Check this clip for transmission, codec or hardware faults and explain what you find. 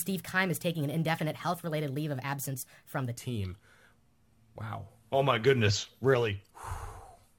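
One fault: a section at the wrong speed, from 0 to 3.17 s. Likely played against a mismatched clock, this stretch runs 1.21 times too fast, so speed and pitch rise together and the speech sounds hurried and roughly three semitones high.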